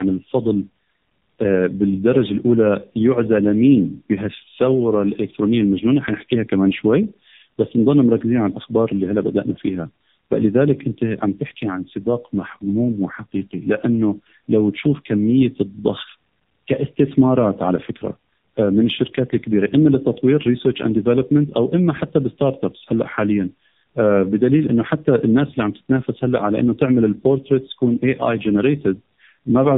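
A speech recording shows tandem speech coding throughout: it passed through two low-rate AMR narrowband coders in a row, which fits about 7 to 8 kbit/s each with a G.711 link between, the second re-coding the first's damaged output. Nothing remains above 3.7 kHz, and the speech sounds muffled, rough and warbly.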